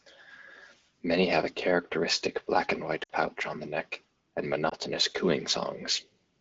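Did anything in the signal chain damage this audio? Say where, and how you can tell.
Yes, lost AMR speech frames on the radio link. After "have a characteristic" (3.03–3.11 s) the sound drops to near silence, fitting three 20 ms frames; after "on the neck and" (4.69–4.74 s) there is a brief dip. The decoder repeats stale parameters at falling gain, showing frozen harmonics and a sagging envelope.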